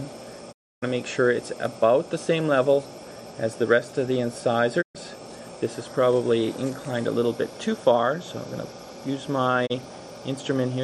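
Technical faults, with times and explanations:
0.51–0.84 s, 4.81–4.97 s and 9.65–9.72 s: digital broadcast dropout. The receiver loses frames and mutes with 20 ms fades, leaving flat waveform gaps and blank full-band spectrogram columns.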